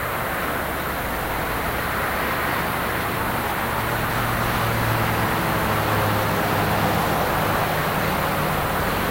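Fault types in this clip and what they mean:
Low bit depth with noise shaping: present throughout, the sound is held at a very coarse resolution, consistent with about 6 bits. The rounding error is fed back so that most of it is pushed toward high frequencies, which produces a steady, thin hiss that climbs sharply toward the top of the band. The hiss sits only roughly 10 dB below the sound, so it stays clearly audible.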